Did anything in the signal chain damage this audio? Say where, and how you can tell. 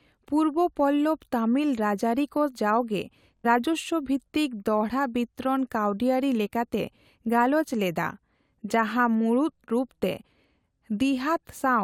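Yes. A Bluetooth stutter on the wireless playback link: from 3.37 to 3.46 s packets went missing, so the receiver kept replaying its last buffer. The speech buzzes on one repeated slice, then jumps ahead about 70 ms, which fits roughly three lost frames.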